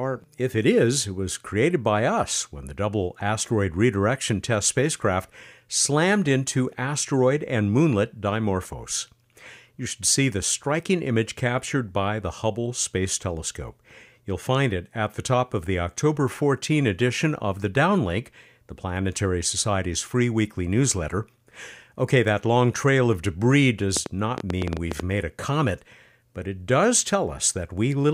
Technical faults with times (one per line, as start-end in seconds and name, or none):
23.97-25.01 train of clicks